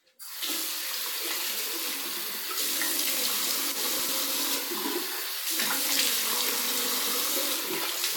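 At 0.45 s a brief soft-edged dip, about 30 ms long, punches into the sound. This is a corrupt frame concealed: damaged bits in one coded frame were caught by the decoder, which filled the gap itself rather than letting a squeak through, so the timing holds. From 3.72 to 4.09 s the sound turns jumbled. These are chunks out of order: a chunk of about 93 ms arrived three chunks late and plays after audio that should follow it. At 4.07 s, inside that stretch, another concealed corrupt frame adds a short smear, which fits two damaged frames. From 5.61 to 5.71 s a longer concealed hole of about 100 ms points to roughly four damaged frames in a row.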